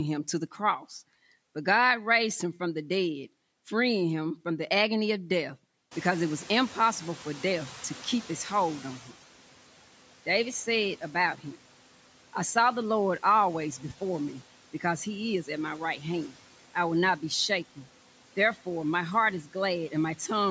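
At about 6 s the room noise jumps by roughly 20 dB, and the noise suppressor is caught out. From 5.91 s to 9.08 s the noise passes with little reduction, then sinks by about 10 dB as its noise estimate catches up over 3.2 s.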